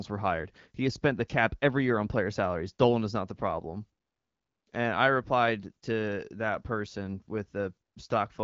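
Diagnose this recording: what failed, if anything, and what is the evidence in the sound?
Nothing in the recording has failed: the speech arrives through an AMR wideband (HD Voice) path at a rate that fits 12.65 kbit/s, where the codec keeps speech clear and leaves only the light coding texture expected of that setting, with the top band above 6.4 kHz filled in by shaped noise.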